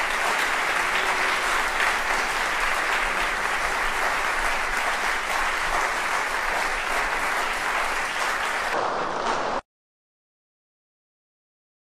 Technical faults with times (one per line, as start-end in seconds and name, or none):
8.74-11.86 section at the wrong speed